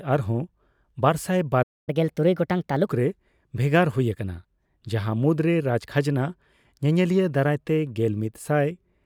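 At 1.62 s the speech halts for about 245 ms, a playback stall, likely a player starved of data. From 1.89 to 2.87 s comes catch-up at higher speed: the backlog plays 1.25 times fast, pitch raised about four semitones.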